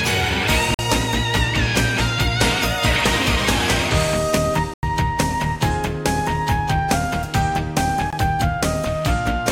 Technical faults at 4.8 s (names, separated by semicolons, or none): block of digital silence